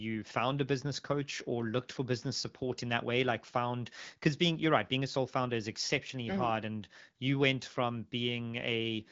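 No technical faults occur in the clip; the speech comes through an AMR wideband (HD Voice) codec at 12.65 kbit/s, with nothing audible above about 7.6 kHz.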